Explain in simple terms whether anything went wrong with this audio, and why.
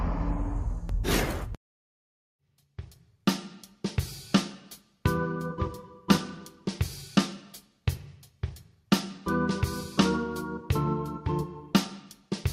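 Nothing went wrong; no faults can be heard.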